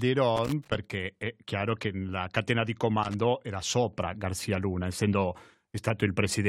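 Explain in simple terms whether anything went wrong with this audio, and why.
A worn or dirty contact in a cable or plug was briefly losing and regaining connection. That loose connector crackle chops the speech into scratchy bursts, from 0.36 to 0.75 s just before "è chiaro che la", and from 3.03 to 3.14 s between "che la catena di" and "era sopra".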